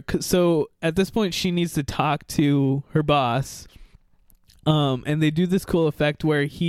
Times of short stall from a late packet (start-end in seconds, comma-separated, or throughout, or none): none